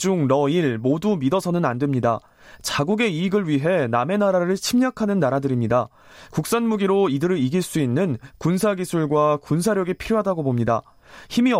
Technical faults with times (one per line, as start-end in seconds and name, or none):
none